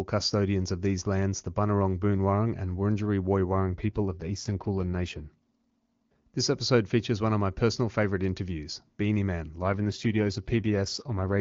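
An AMR rate drop occurs twice in this speech, from 3.52 to 6.28 s and again from 9.61 to 11.35 s. In both stretches the speech turns rougher and more synthetic with a raspy edge. The bandwidth stays the same and there is no gap. This fits the radio network switching the wideband AMR codec down to around 8.85 kbit/s from its clean 23.85 kbit/s rate, spending the freed bits on error protection and leaving fewer bits for the speech itself.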